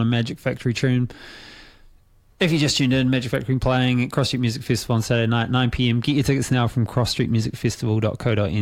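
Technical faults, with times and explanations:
No technical faults can be heard in this recording.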